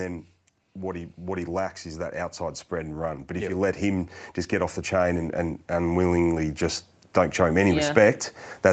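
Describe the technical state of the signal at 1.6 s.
At 1.6 s the automatic gain control has judged the input too quiet and is partway through a slow rise in its gain, part of an automatic gain rising fault that runs from 0.75 s to 8.25 s and adds about 13 dB overall. Because the gain is applied to the whole signal, speech and background noise swell upward together, so the level here is still climbing. The band stops near 8 kHz, which fits the call's codec path.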